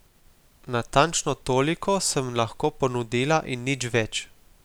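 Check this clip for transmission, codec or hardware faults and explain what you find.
Listening through the speech, nothing stood out as a problem.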